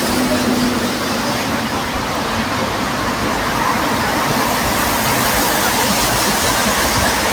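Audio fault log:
Nothing stood out on listening to this audio.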